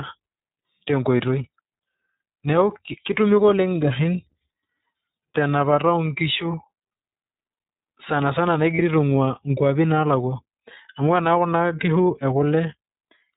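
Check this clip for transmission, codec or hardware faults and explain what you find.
Two faults, both from the same VoIP codec path.

All the way through, the speech has the iLBC codec's sound: nothing above 4 kHz and a plainly rough, synthetic edge, which fits its 30 ms, 13.33 kbps mode.

At about 8.75 to 8.80 s there are lost iLBC frames, probably a single dropped frame of around 30 ms. The decoder fills the hole by repeating the last pitch cycle with some noise, so you hear a brief held, buzzy vowel before the speech snaps straight back.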